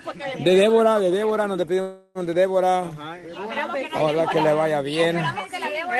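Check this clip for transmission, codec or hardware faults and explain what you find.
There's one clear fault, a call audio freeze, running from about 1.81 to 2.18 s. The sound doesn't drop out. It stretches into a fading buzzy tail for roughly a third of a second, then picks up right where it left off, so nothing is lost but everything after lands about 340 ms late. That's most likely packets stalling in transit and the jitter buffer running dry, with the receiver smearing the last sound to fill the wait. Underneath it all, the top end stops around 12 kHz, which fits the call codec's bandwidth.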